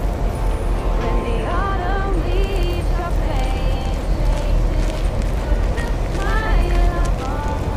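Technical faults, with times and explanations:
No technical faults are audible anywhere in the clip.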